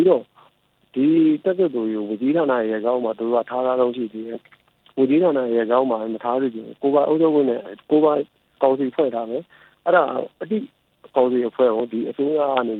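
Nothing in this one trips the ear as a technical problem; the sound just rolls along without any hiccup worth pointing at.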